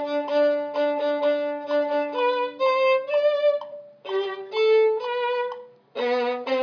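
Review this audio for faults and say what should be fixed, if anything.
Nothing here needs fixing; no faults were heard.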